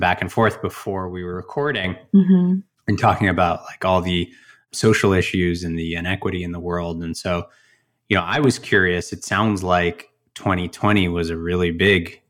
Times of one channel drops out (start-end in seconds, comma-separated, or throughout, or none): 0.83-1.84, 8.20-8.44